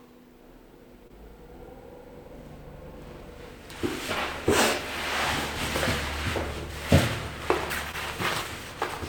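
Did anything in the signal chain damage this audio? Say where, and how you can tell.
Yes, at the network stage. There's short concealed packet loss in two places, around 1.07 to 1.11 s and 7.91 to 7.95 s. Each is a quick smear or wobble rather than a clean gap. About 20 ms of audio didn't reach the decoder in time both times, and the receiver bridged the hole by extending the preceding sound, then crossfaded back into the real signal.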